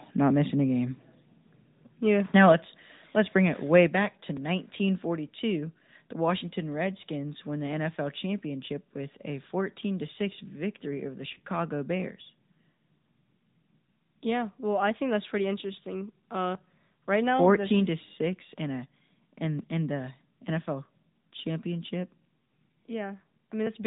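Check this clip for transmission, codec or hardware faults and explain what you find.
Four kinds of fault are audible in this speech.

Throughout, the AMR narrowband mobile codec limits everything to below 4 kHz and gives a plainly buzzy, synthetic edge, which suits a mid rate near 10 kbps. A spectrogram shows a hard ceiling at 4 kHz.

From 2.36 to 2.52 s, microphone overload cuts off the peaks by about 5 dB, probably from an input gain set too high. It sounds like a harsh crackle. The waveform shows flat-topped peaks on a few percent of samples.

At 2.52 s and again at 3.87 s, the microphone volume is stepped down by 4 dB. This is likely automatic gain control reacting to the clipping. Voice and background drop together, and the waveform envelope shows a visible step each time.

From 11.34 to 11.40 s, lost AMR speech frames cause a brief dip and warble. This points to a single lost 20 ms frame that the decoder concealed by repeating the previous settings at reduced gain. 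It appears as a short smeared gap in the spectrogram.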